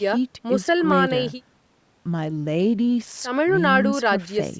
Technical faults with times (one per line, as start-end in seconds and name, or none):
none